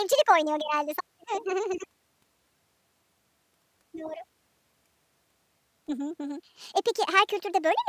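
A wrong sample rate runs through this speech clip: samples captured at one rate are played back faster with no conversion, which fits material recorded at 22 kHz being played at 32 kHz. Speed rises about 1.45 times and pitch climbs about 6.5 semitones together, so the voice sounds high and hurried throughout.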